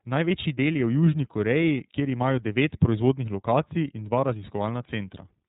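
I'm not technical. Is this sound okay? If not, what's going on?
No. The speech has been squeezed through the iLBC codec, a phone-call format, for the whole clip. Nothing above about 3.8 kHz gets through, so it sounds thin. It codes speech in 30 ms slices, which leaves a plainly rough, synthetic edge.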